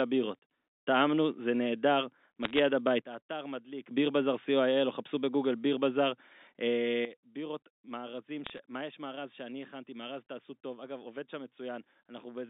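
Telephone-band speech, carried as G.711 mu-law, shows two faults. Bit errors on a digital phone line cause bursts of sharp ticks from 2.43 to 2.59 s and from 8.44 to 8.58 s. Each flipped bit corrupts a single sample, at an error rate of a fraction of a percent. Unlike dropouts or packet loss, the speech itself continues unbroken beneath the crackle. A sudden gain jump drops the level by about 13 dB from 3.02 to 3.91 s, and by about 12 dB from 7.05 s to the end. The step is most likely a digital gain change applied with no ramp. It differs from a fade or compressor action because speech and background noise fall together, instantly, at one sample.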